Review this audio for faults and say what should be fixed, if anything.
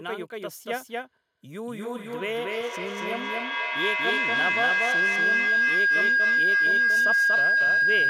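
A doubled audio track runs through the whole speech. A second copy trails by about a fifth of a second at similar level, likely from a slower capture path.

A feedback howl starts at 1.56 s and lasts to the end at 8.09 s. It sits near 1.5 kHz, pulses roughly every third of a second, and peaks about 8 dB above the speech.

To prevent these faults, record from a single capture path and keep only one device in the room joined to the call, or mute the extra one.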